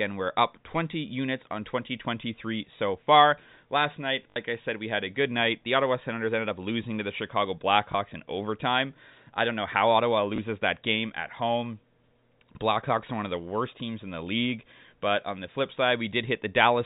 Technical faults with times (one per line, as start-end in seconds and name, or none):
4.30-4.36 packet loss with last packet repeated
7.92-7.94 packet loss with last packet repeated
10.36-10.38 packet loss with last packet repeated